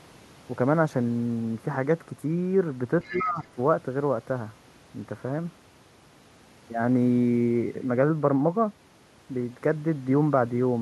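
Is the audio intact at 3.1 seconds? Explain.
No. Around 3.1 s two echo-canceller problems overlap. The first is the other side's voice leaking through, from 3.02 to 3.3 s. The far end's audio, played on the talker's loudspeaker and picked up again by the microphone, was likely not fully cancelled. A faint second voice can be heard under the talker, roughly 15 dB below the speech.

The second is speech suppressed in double talk, from 3.04 to 3.58 s. With both sides talking at once, the canceller likely could not tell the near talker from the loudspeaker echo and pulled the whole signal down. The talker's voice dips by as much as about 15 dB for about half a second.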